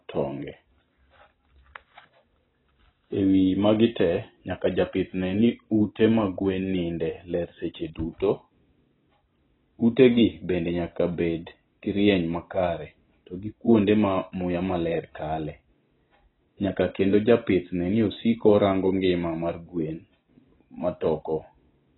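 Speech throughout with AAC compression damage, likely from heavy AAC-LC coding near 16 kbps: dull, warbly sibilants, and a spectrogram showing a hard ceiling at 4 kHz.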